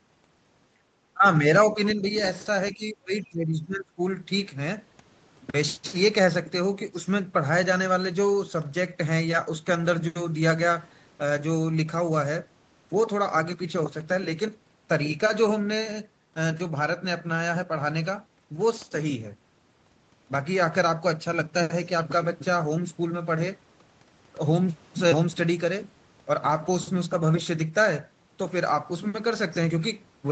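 At 1.14 to 1.24 s the speech drops by about 20 dB for a brief moment. From 1.73 to 2.07 s it dips again, more gently, by about 5 dB. From 2.72 to 4.01 s it sinks by about 20 dB for about a second. This is likely speech suppressed in double talk. The echo canceller turned everything down while both sides spoke.

A faint second voice, about 20 dB below the speech, slips in at 1.88 to 1.93 s and 2.18 to 2.23 s. These are short scraps. The likely cause is the other side's voice leaking through from the loudspeaker. The echo canceller left that residue in the microphone signal.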